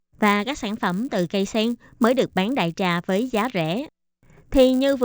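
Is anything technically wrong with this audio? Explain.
Yes. Resampler restarted on every block, throughout: each 10 ms block was converted from 16 kHz to 48 kHz in isolation, leaving edge errors heard as a 100 Hz buzz under the speech.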